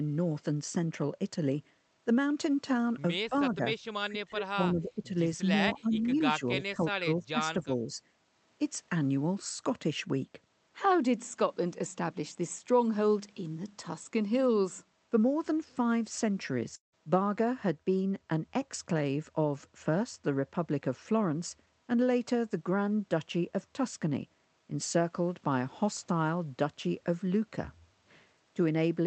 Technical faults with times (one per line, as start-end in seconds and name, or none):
3.55-3.62 speech suppressed in double talk
4.04-5.09 speech suppressed in double talk
5.81-5.93 speech suppressed in double talk
5.93-6.15 echo leak
6.39-8.01 speech suppressed in double talk
16.75-16.94 long network dropout